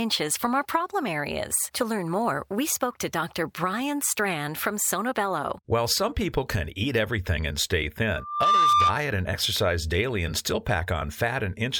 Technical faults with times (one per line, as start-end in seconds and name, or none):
8.16-8.98 loudspeaker feedback squeal